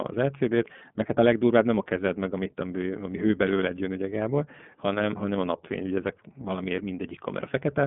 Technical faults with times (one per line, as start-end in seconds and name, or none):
0.00-7.87 iLBC codec